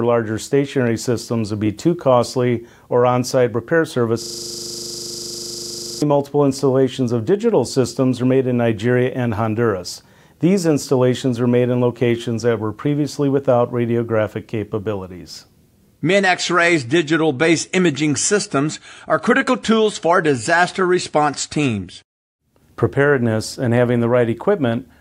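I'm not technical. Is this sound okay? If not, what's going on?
No. From about 4.22 to 6.02 seconds there's a system hang loop. The computer briefly froze, but the sound hardware kept replaying the last scrap of audio it had. That scrap is only 40 milliseconds long, and it repeats about 45 times, 25 times a second. Instead of the sound carrying on, you hear a rapid, rattling buzz for nearly two seconds.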